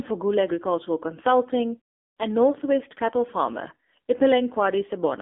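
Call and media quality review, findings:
AMR narrowband mobile codec, full clip. Speech buzzy, synthetic, band-limited. Spectrogram: empty above about 3.6 kHz, thin below 250 Hz, harmonics smeared frame to frame. Few-pulse vocal-tract model under heavy bit pressure, which fits a low AMR-NB mode near 6.7 kbps.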